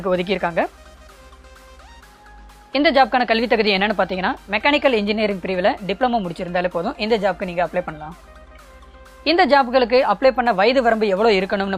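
From start to finish a steady mains hum sits under the sound: a fixed low tone at 50 Hz with some low harmonics above it, roughly 30 dB below the programme. Power-line current is leaking into the signal path, through a ground loop or a nearby transformer. Unlike rumble from handling or wind, which wanders and spreads across the low end, this hum holds one exact pitch and never changes level.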